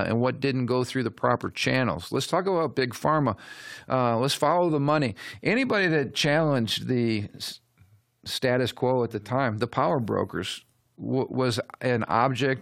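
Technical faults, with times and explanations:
No technical faults can be heard in this speech recording; the signal stays continuous and steady in level, with nothing added to or taken from it.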